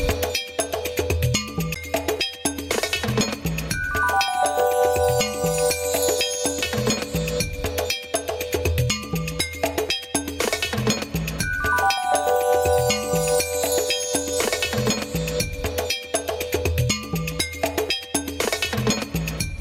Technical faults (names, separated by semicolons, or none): gain pumping; CD skip